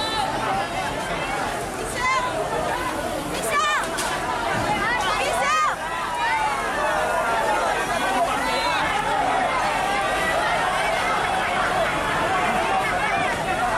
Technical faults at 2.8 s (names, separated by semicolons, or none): drift correction step